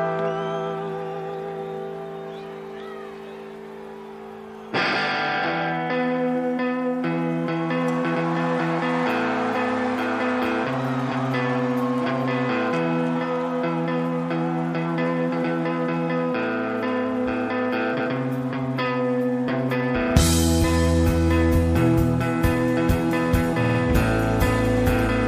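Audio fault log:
17.99–18.12 s and 23.63–23.79 s, repeated frames: a block of compressed audio plays again. First a 131 ms block repeats once. Then a 52 ms block plays three extra times. Together they lengthen the audio by about 0.29 s.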